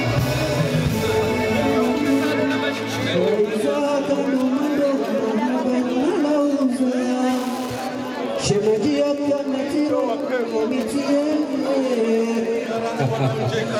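A steady ticking, about ten times a second, runs through the whole clip and sits well below the main sound. This is Wi-Fi interference: a nearby Wi-Fi radio's beacon, sent every 102.4 ms, is picked up and rectified by the audio circuit.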